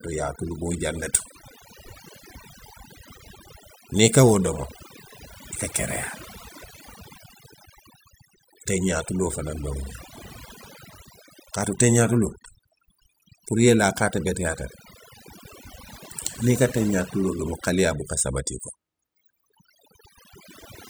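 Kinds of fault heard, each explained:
Overdone noise removal: a noise reduction stage was pushed too hard on a noisy recording, so every frequency band that dipped close to its noise estimate was cut deeply or switched off, and the softer parts of the speech fell below that line too. Across the whole clip the background drops and breaks up into twinkling, chirpy specks, while the speech has its quieter detail stripped away.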